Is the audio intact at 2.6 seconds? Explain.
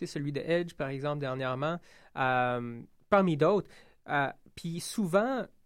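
Yes, the audio is intact at 2.6 seconds, with no audible fault at that moment.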